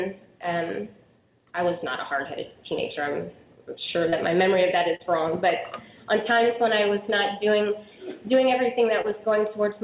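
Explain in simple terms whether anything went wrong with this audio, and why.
Short concealed packet loss: three times, about 30 ms of audio arrived too late, at 4.10 to 4.15 s, 4.96 to 5.02 s and 9.01 to 9.07 s. The receiver filled each gap by stretching the preceding sound, heard as a quick smear or wobble, over phone-like sound with nothing above 4 kHz.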